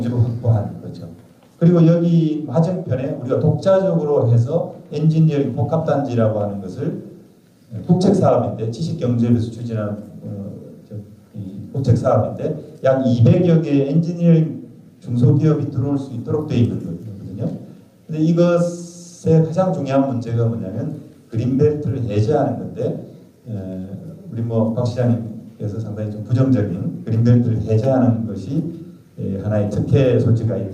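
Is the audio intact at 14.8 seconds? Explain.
Yes, the audio at 14.8 seconds is intact, with no dropout, click, distortion or other fault audible at that moment.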